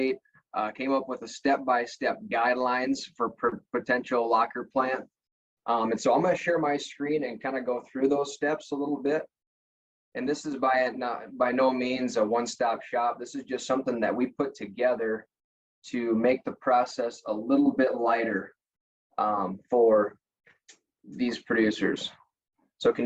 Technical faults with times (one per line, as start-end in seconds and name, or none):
none